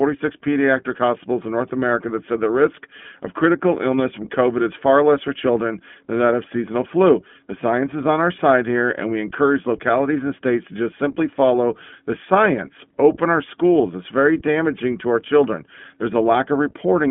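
The iLBC codec runs throughout the speech. Nothing reaches above 3.7 kHz, and the band sits between 150 Hz and 3.5 kHz. Each short frame is coded on its own, which fits 20 ms frames at 15.2 kbps. The speech sounds plainly rough and synthetic.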